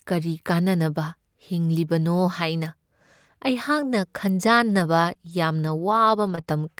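Between 4.47 and 6.62 s, scattered short gaps appear: a handful of packets, roughly four, went missing or arrived late, and the receiver filled each hole of about 20 ms or less by extending the preceding speech. The result is brief ticks and tiny hiccups.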